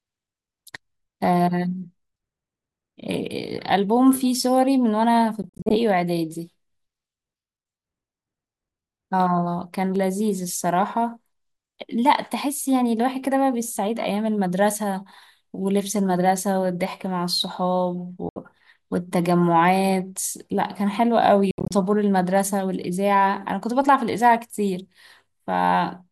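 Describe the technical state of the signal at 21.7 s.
Audio packets likely reached the headphones too late and were dropped, a Bluetooth dropout from 21.51 to 21.74 s. 140 ms of sound vanishes in silent gaps spread over 196 ms, the longest 70 ms, and the speech resumes further along, as if it had kept playing.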